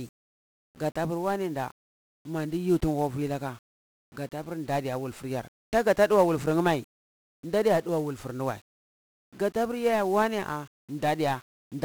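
From start to finish the speech is fuzzy and crackly, with a dense hiss sitting over everything and the upper frequencies swallowed by it, so consonants lose their edges. This is heavy 1-bit DFPWM compression: each sample carries only a single bit that nudges an adaptive level up or down, so the waveform is traced in coarse steps and the resulting quantisation noise spreads across the whole spectrum. The degree of damage fits a rate of around 48 kbps.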